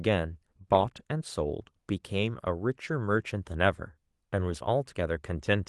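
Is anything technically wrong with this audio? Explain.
No, nothing in this speech clip is technically wrong. The Opus voice compression keeps the full audio band, with the high end above 8 kHz intact as in its hybrid mode, and its light coding texture fits a rate around 24 kbps.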